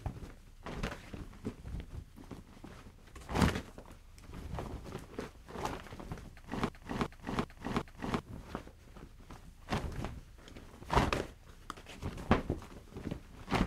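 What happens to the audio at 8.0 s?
At 8.0 s you're in the tail of a broken-record loop running from 6.69 to 8.19 s: a 0.38 s fragment plays four times back to back. Likely the playback or stream stalled and kept resending that last chunk, so whatever sound belonged there is gone.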